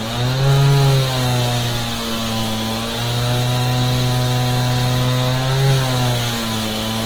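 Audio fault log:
throughout, Opus compression: tones sound grainy, rough and noisy as starved bands are refilled with noise, likely a CELT-mode encode near 16 kbps, still reaching 20.1 kHz.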